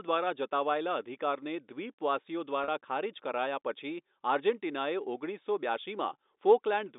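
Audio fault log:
2.64–2.68 s, packet loss with pitch repetition: about 40 ms of the stream never arrived, a gap that fits two 20 ms packets, and the receiver covered it by repeating the last pitch period of the speech instead of leaving silence. Because the loss is this short, it never fades to quiet. The sound holds briefly on one steady, slightly buzzy pitch before the speech resumes, heard through the G.711 telephone band that stops near 3.7 kHz.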